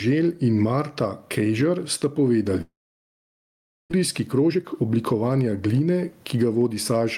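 Throughout, input gain set too high, with a fast limiter, is the likely cause of gain pumping: the level swings by about 15 dB, squashing loud and soft parts closer together.

From 2.61 to 3.94 s, a long network dropout likely cut the stream. A brief fading continuation of the last sound gives way to near silence for about 1.2 s, and about a second of sound is lost.

From 4.20 to 6.35 s, a jitter buffer speed-up trims short pitch-period pieces to shed the built-up delay, a few tenths of a second in all, so the speech runs about 13% faster at unchanged pitch.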